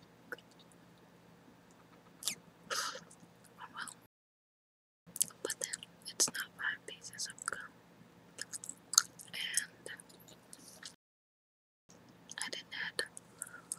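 The sound cuts to silence at 4.06 s for about 1.0 s, resuming at 5.07 s, then again at 10.94 s for about 0.95 s until 11.89 s. These are playback stalls, likely the player running short of data or its thread being blocked.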